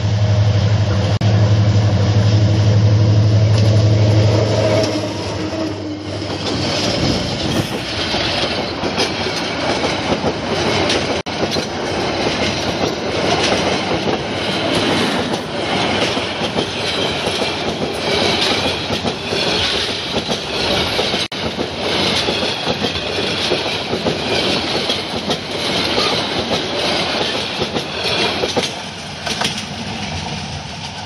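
Gaps at joins of encoded pieces fall at 1.17 to 1.21 s (38 ms), 11.21 to 11.26 s (54 ms) and 21.26 to 21.32 s (54 ms), every 10 s. Separately encoded segments were spliced with their start delay and end padding untrimmed, so brief silences with smeared edges interrupt the sound before it resumes.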